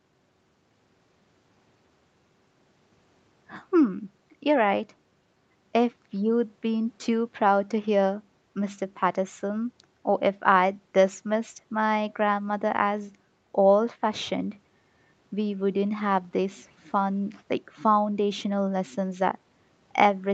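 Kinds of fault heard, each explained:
No faults: the speech stops at 8 kHz, the expected band limit of the call microphone processing and Opus call path, not a defect.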